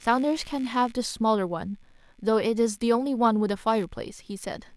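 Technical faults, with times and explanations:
Throughout: computer activity noise, a faint buzzy chirping pulsing at around 70 Hz, well below the speech, as the computer's load changes shift the shared ground feeding the audio circuit.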